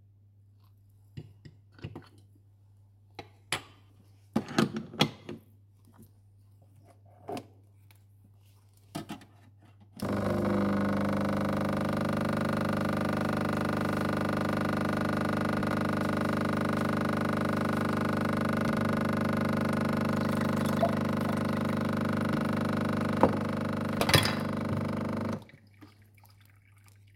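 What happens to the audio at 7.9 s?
Nothing goes wrong at 7.9 s; the sound plays through that moment intact, with no dropout, click, distortion or other fault.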